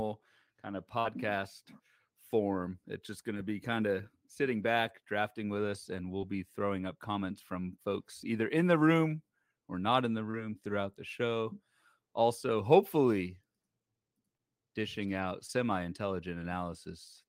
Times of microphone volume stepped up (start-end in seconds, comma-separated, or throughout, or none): none